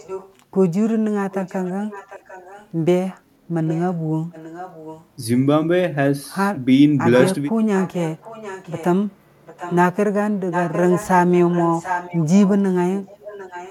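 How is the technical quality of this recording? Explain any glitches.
The recording is marred by recurring echo leak. A faint, delayed copy of the speech, about 0.75 s late and well below the main level, returns at 0–0.34, 1.31–2.69, 3.66–5.05, 7.25–8.85, 9.44–9.76 and 10.51 s to the end. It is likely a far-end echo canceller letting loudspeaker pickup through. The distinct late repeat separates it from room reverberation, which smears instead.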